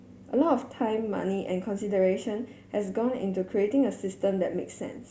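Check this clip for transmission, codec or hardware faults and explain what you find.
Nothing wrong turns up here: the speech carries steadily throughout, with no sign of a transmission, codec or hardware problem.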